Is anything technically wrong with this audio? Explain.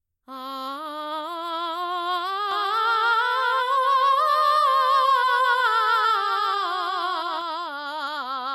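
Yes. From 2.51 s to 7.41 s the music has a doubled audio track. A single full-band copy trails the original by roughly 0.4 s, a few dB quieter. It is likely a second capture through a slower path, or an edit that left two copies misaligned. Unlike an echo or reverb, the copy repeats only once, with no decay and no room colour, and it switches on and off abruptly at those two points.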